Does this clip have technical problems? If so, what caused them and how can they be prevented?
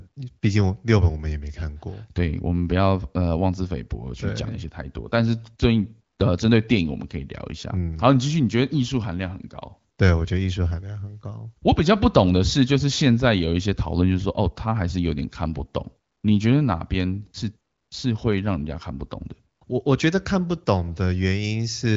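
No, the speech comes through intact, with the AMR wideband (HD Voice) codec working as intended: the bandwidth stops at about 7.5 kHz, and the light coding character fits a rate around 15.85 kbit/s.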